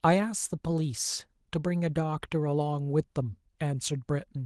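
No faults to report; the speech is carried over Opus voice compression in hybrid mode at what sounds like about 20 kbps, with only light coding damage.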